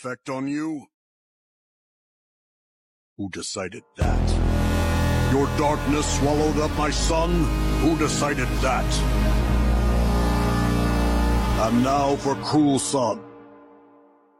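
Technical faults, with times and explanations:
Nothing here to flag; the audio runs along without any technical trouble worth noting.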